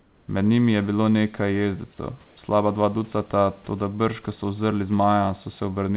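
Comfort noise in place of the background fills 0 to 0.28 s and again 2.26 to 2.36 s, where the real room background gives way to a smooth, featureless hiss, about 4 dB quieter in the first stretch and about 2 dB louder in the second, sitting about 36 dB below the loud parts. The likely cause is discontinuous transmission: the sender stopped sending during those pauses and the receiver synthesised shaped noise until the speech returned.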